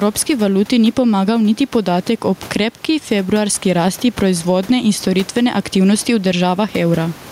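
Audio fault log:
throughout, gain pumping: the gain swings roughly 10 dB, ducking under loud speech, likely too much input gain hitting a fast limiter.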